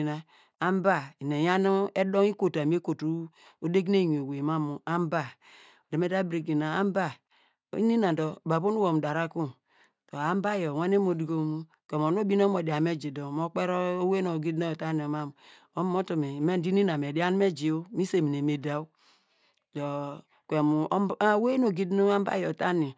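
Nothing technically wrong turns up anywhere in this speech recording, so there's no fault to pin to a time or trace to a cause.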